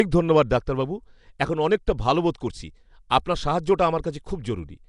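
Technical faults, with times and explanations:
Throughout: Nellymoser compression. The whole clip has that rough, hissy fuzz around the speech and a smeared, underwater feel, and there's nothing at all above 10.6 kHz. That's what you get when a codec runs a fixed, thin bit budget over short blocks, starving the weaker bands and filling them with noise. The damage is plainly audible, and the sound is most likely Flash's Nellymoser Asao, at a rate that fits something around 44 kbps.
1.87 s: pre-echo. Right before a sharp attack there's a brief whisper of hiss, spread over about 10 ms, and the onset itself comes across soft rather than crisp. The codec smears its quantisation noise evenly across the whole block, so when a loud hit lands late in that block, noise sized for the loud part leaks into the quiet moment just ahead of it. That's the little pre-attack smudge you're hearing.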